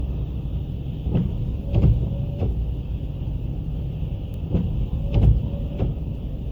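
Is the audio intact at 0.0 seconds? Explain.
No, it's not. Right from 0.0 s and through the whole clip there's generation loss: swirly, smeared, hollow sound with blurred attacks, likely from re-encoding around seven times as something like 96 kbit/s MP3, with each pass piling on fresh quantisation noise. Nothing shows above 19.9 kHz.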